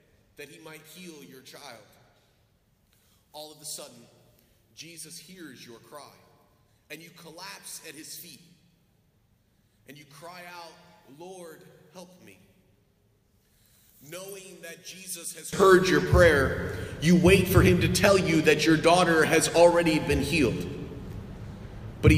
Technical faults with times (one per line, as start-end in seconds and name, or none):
0.00-15.53 one channel inverted